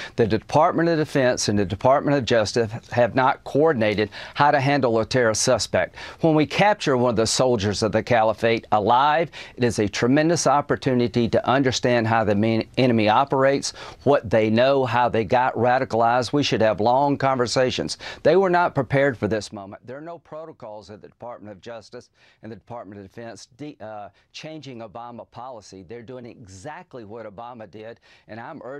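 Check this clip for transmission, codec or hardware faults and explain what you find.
One fault is audible, zipper noise. From 19.24 to 19.64 s a fast ticking, zipping texture rides on the sound as it drops by about 20 dB. The fade is applied in coarse steps, around a hundred per second, without smoothing, so each jump leaves a small click.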